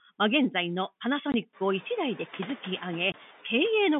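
Noise suppressor artifacts run through the whole speech clip: the suppressor pulls down the bands it judges to be steady noise by about 7 dB between words and lets them back up under speech, so the background pumps, most noticeably once the room noise rises around 1.5 s. Packet loss filled with silence strikes at 1.32 to 1.34 s and again at 3.12 to 3.14 s. Each gap is a 20 ms hole, which fits one lost 20 ms packet replaced by digital silence, with abrupt edges. The narrow telephone band of roughly 150 Hz to 3.6 kHz comes from the G.711 line.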